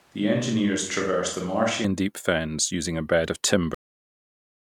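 From the very start until 1.85 s the speech comes through a switch to a distant microphone. The close microphone's feed was likely missing, so a mic further off carries it. The sound is roomy and hollow, thinner in the bass and a little quieter, and the room noise sits well below the speech. It differs from plain reverb or EQ because the change is abrupt: at 1.85 s, just before "and deep fens using", the close, full sound returns at once.

At 3.74 s, right after "using a bed of", a cut-off end stops the audio mid-sound. The final stretch of buffers never reached the output, so the signal falls straight to digital silence and stays there for the last 0.9 s. No decay or reverb tail follows. That sets it apart from a fade-out or an ordinary pause, which would leave the sound to die away naturally.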